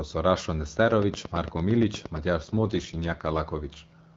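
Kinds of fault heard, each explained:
Train of clicks: From 0.91 to 2.18 s, about ten near-identical clicks tick over the speech at a steady 8.7 per second, peaking around 10 dB above the sound and continuing through the pauses. The likely cause is interference from nearby equipment or a faulty connection or power supply injecting the same pulse again and again. The even spacing and matching shape set it apart from random crackle, and since nothing drops out, it is not a train of dropouts.
AMR rate drop: From 2.40 to 3.40 s the AMR wideband coding, clear at 12.65 kbit/s before this, falls to 6.6 kbit/s, one of its two lowest rates. With fewer bits for the vocal-tract model, the speech turns rough, raspy and synthetic, then recovers when the rate climbs back. The audio band stays the same width and the sound never breaks, which distinguishes this from a bandwidth switch or packet loss.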